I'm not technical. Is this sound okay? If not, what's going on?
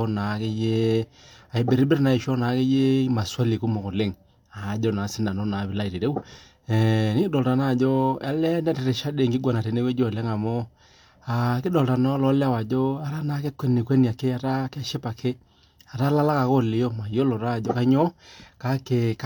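Yes, it's fine: nothing in this recording is going wrong, so there's nothing you need to worry about.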